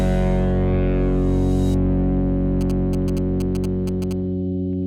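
From 2.61 s to 4.13 s a galloping dit-dit-dit of short buzzes cuts through the audio, each buzz pitched at about 217 Hz and sitting roughly 20 dB below the sound itself. These are GSM signalling bursts. A nearby 2G phone was transmitting brief groups of radio bursts, as it does ahead of an incoming call or text. The audio circuitry rectified that radio energy, turning the burst timing into an audible buzz.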